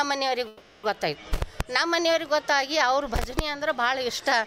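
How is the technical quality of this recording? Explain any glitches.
The recording has one glitch, a call audio freeze from 0.47 to 0.86 s. The sound holds as a fading buzz or hiss for about 360 ms, then resumes where it stopped with nothing lost, likely from delayed packets draining the jitter buffer. A spectrogram would show a smeared, decaying stripe; the waveform a tapering block.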